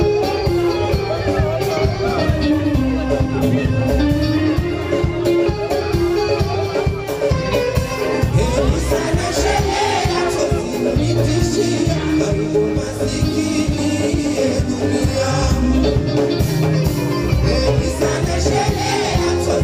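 No technical faults can be heard anywhere here.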